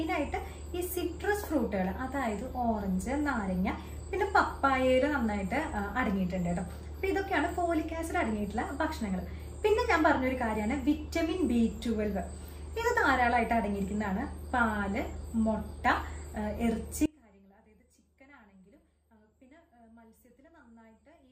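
From 17.06 s to the end, one channel inverted in polarity is the likely cause. When the two channels are summed to mono, everything they share cancels. The sound falls by about 28 dB, leaving only a faint trace of their difference.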